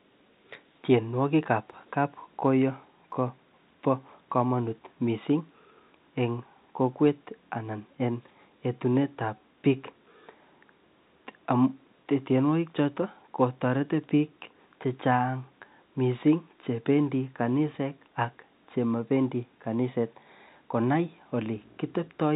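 No technical faults can be heard in this speech clip. It has the narrow band of G.711 telephone coding, with nothing above 4 kHz and a faint quantisation noise that rises and falls with the level of the sound.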